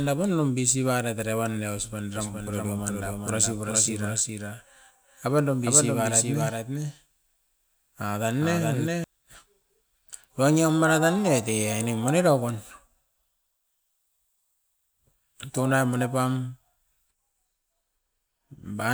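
Speech with a doubled audio track from 2.16 to 9.04 s: a dry copy about 5 dB quieter trails roughly 0.4 s behind, cutting in and out abruptly, likely from a second, slower capture path.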